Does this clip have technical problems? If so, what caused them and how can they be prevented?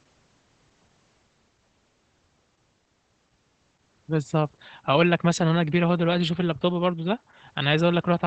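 Yes. Opus voice compression affects the whole speech clip. Nothing is heard above about 8.4 kHz, so the band is cut to wideband. The SILK predictive coder quantises the excitation coarsely, so speech sounds muffled, hoarse and slightly robotic. This fits a bitrate near 12 kbps. Encoding at a higher bitrate would prevent it.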